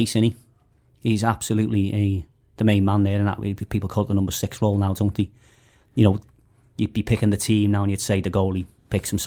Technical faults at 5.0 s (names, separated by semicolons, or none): none